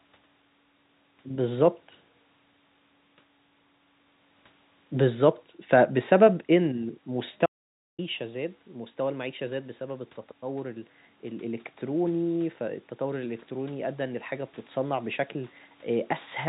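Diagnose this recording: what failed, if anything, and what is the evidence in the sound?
Audio dropout to silence from 7.46 to 7.99 s: the speech cuts off mid-flow, and the room noise vanishes too, leaving 0.52 s of dead digital silence. The input device or link likely dropped out while the recorder kept writing silence.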